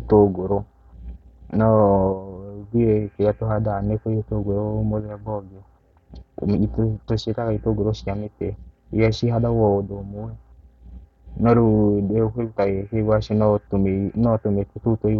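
From 1.48 s to 15.10 s, faint ticks recur roughly every one and a half seconds, about ten in all. These are clock slip clicks, likely from two unsynchronised clocks drifting by about 15 parts per million. Each time, one sample slips, leaving a small regular tick in the speech.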